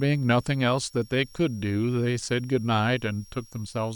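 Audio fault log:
Throughout: switching supply whistle, a thin high whistle sitting roughly 30 dB below the speech, wandering between about 5.5 and 5.7 kHz rather than holding one pitch. A switching power supply in the recording chain is cycling in an audible burst mode, or two supplies are beating, and the tone's frequency follows the changing load. That drifting pitch is what separates it from mains hum or a ground-loop buzz, which sit low and fixed.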